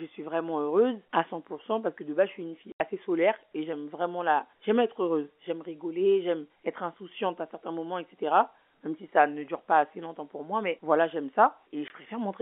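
A French speech clip, carried over what sounds like a 250 Hz to 3.4 kHz G.711 phone line, has packet loss filled with silence. There's an 80 ms hole at 2.72 to 2.80 s after "base je suis une", and a 20 ms one at 11.88 s after "moi mais voilà j'aime", both dropping out with hard edges. The lengths fit lost 20 ms packets.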